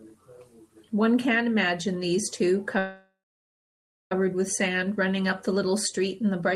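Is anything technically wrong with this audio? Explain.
Yes: a call audio freeze from 2.78 to 4.12 s, likely a stalled jitter buffer. The sound is stretched into a fading buzz or hiss, then about 0.97 s of silence, and resumes without loss, unlike a dropout.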